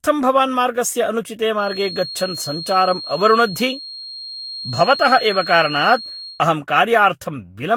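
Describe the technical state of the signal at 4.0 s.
At 4.0 s the speech carries a feedback whistle, a thin steady tone at 4.2 kHz, about 15 dB below the voice. It runs from 1.55 s, just after "भवान् मार्गस्य अनुचिते", to 6.45 s. The likely cause is a loudspeaker-to-microphone loop held just short of runaway. Unlike an electrical interference tone, it swells and fades slowly in level and never swells into a howl.

The same moment also shows generation loss across the whole clip. The voice sounds swirly, smeared and hollow, with blurred attacks and nothing above 19.3 kHz. This is likely from roughly seven successive Vorbis encodes at 61–62 kbit/s, each requantising on a shifted frame grid. A single encode at that rate would sound cleaner than this.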